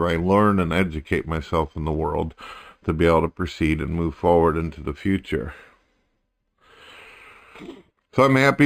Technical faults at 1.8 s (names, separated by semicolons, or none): imaging from linear upsampling